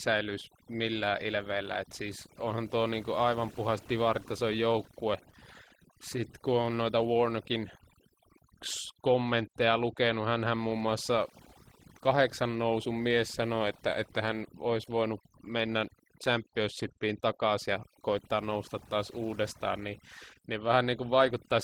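A speech recording runs about 22 seconds with two faults throughout. Overdone noise removal, set far too strong, shuts off frequency bands near its noise estimate, leaving near-silent gaps with twinkling specks. Opus voice compression, in hybrid mode with a CELT layer above 8 kHz over the linear-prediction core, is plainly audible at a rate fitting about 16 kbps, making the speech hoarse and slightly robotic even though the band reaches 20.1 kHz.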